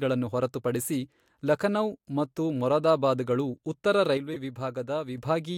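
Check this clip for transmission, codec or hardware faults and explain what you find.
Two faults show up near the end of the speech, both just after "ಲಖನೌ ಮತ್ತು ಮೊರಾದಾಬಾದಗಳು ಉತ್ತರ".

From 4.17 to 5.18 s the level drops by about 6 dB, likely from one channel dropping out. Once the channels are folded to mono, the shared content loses half its amplitude.

At 4.33 to 4.37 s there's a corrupt frame decoded. Damaged bits in a single frame put energy at the wrong frequencies, and you hear it as a short glitch of around -20 dBFS.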